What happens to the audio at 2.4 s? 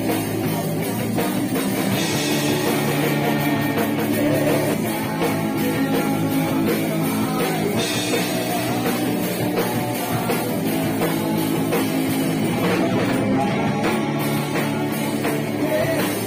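At 2.4 s the sound is a doubled audio track, running from 1.68 to 4.74 s: a second copy trails roughly 200 ms behind, a few dB quieter, likely captured again through a slower path. On a spectrogram every event appears twice, side by side, with no decay. The echo switches on and off abruptly.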